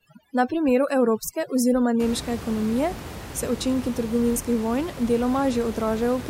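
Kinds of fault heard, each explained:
overdone noise removal: For the first 2 seconds the background drops and breaks up into twinkling, warbling specks, until just before "nemške ekonomije se". A noise reducer set far too strong is cutting individual frequency bands whenever they fall near its noise estimate, so the quieter parts of the voice are stripped away along with the room noise, which afterwards sits about 13 dB below the speech.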